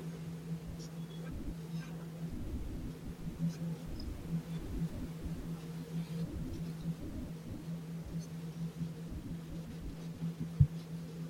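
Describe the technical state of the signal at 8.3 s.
At 8.3 s the speech signal is intact, with only the room's own background noise sitting about 16 dB below the voice.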